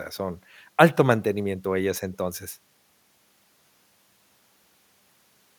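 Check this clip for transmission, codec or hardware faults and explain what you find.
Nothing stands out here: I can't hear any fault anywhere in this speech recording.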